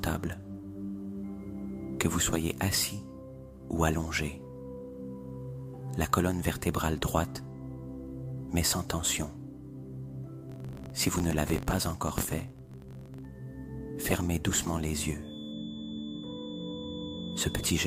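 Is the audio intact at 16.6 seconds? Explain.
No, at 16.6 s there's a feedback whistle, running from 15.19 s right to the end. It's a thin, steady 3.5 kHz tone sitting roughly 20 dB under the sound, swelling and fading slowly, likely a speaker-to-mic loop hovering just short of runaway.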